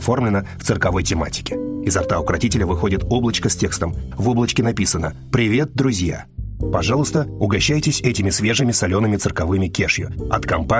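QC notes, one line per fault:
No technical faults are audible anywhere in the signal.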